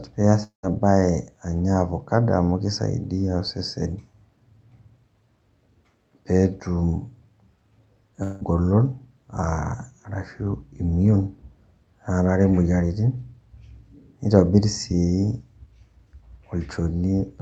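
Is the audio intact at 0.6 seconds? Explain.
No. Between 0.43 and 0.65 s, right after "pee iaas", the sound smears into a fading buzz, drops to about 120 ms of silence, and resumes at "baye anya avocado" with material gone. This is likely a long network dropout: about 200 ms never arrived, and the receiver filled the gap.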